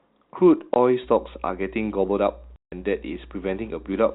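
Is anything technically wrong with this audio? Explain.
Yes, there are two kinds of fault in this telephone-band speech, which is cut off above 4 kHz as G.711 coding would do.

Packet loss filled with silence occurs at 0.74 to 0.76 s (20 ms) and at 2.56 to 2.72 s (160 ms, which fits eight 20 ms packets). Lost packets were replaced by silence, leaving abrupt holes with hard edges, seen as flat-line gaps in the waveform.

Mains hum runs from 1.02 s to the end: a steady 60 Hz tone coupled in from the power line, roughly 20 dB below the speech, seen as a constant low horizontal band on the spectrogram.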